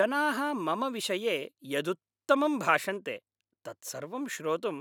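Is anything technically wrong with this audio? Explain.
No, the signal shows no technical faults anywhere in its course, with nothing in it that points to a problem in how the audio was captured, processed or delivered.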